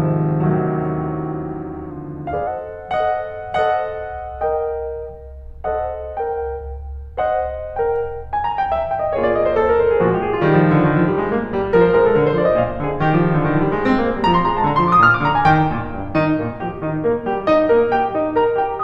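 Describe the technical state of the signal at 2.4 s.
A drift correction step is in progress at 2.4 s, part of a span running from 1.90 s to 2.47 s. The music slows by 5.25 percent and drops 93 cents, nearly a full semitone, with speed and pitch falling together before snapping back at 2.47 s. This is likely clock-matching software abruptly lowering the playback rate in one jump to rebalance its buffer, heard as a sudden flat detuning of the music.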